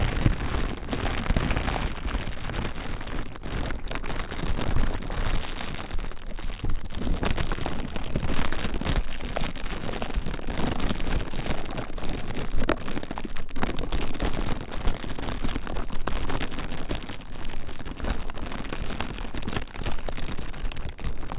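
No technical faults can be heard anywhere in this recording of sounds.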